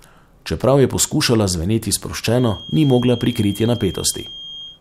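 A feedback whistle enters at 2.27 s, just after "je poskušala zveneti", and continues to the end of the speech at 4.80 s. It is a thin, steady tone at 3.2 kHz, sitting roughly 20 dB below the speech and swelling and fading slowly in level. The likely cause is a loudspeaker-to-microphone loop poised right at the edge of instability, so that single frequency keeps recirculating without building into a full howl.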